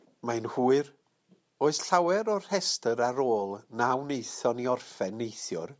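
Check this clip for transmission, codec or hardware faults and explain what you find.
Nothing in the recording stood out as a problem on listening.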